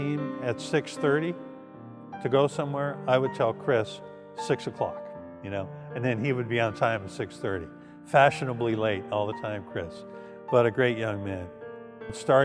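No technical faults can be heard anywhere in the signal, which stays steady and intact throughout.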